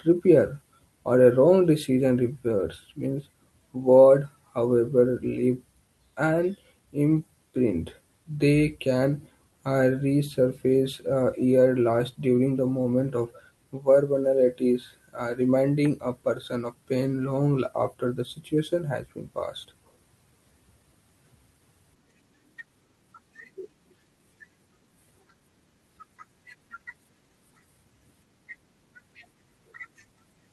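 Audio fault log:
throughout, clock drift between sender and receiver: the sender's clock runs fast by around 4 percent, so the jitter buffer keeps overfilling and the receiver has to discard audio to keep pace. Unlike packet loss, this leaves no gaps or muffled patches, only small hiccups recurring unevenly.
0.08–30.13 s, repeated timing corrections: the receiver keeps trimming short pieces, so the speech runs at 104 percent of its natural pace, always shortened and never stretched. Unlike a simple speed-up, pitch stays put, and the trims fall at irregular spacing.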